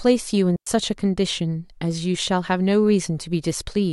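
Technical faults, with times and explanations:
0.56–0.67 s, digital wireless dropout: the receiver mutes for about 107 ms with a quick fade, leaving clean near silence, without the noise burst of an analogue dropout.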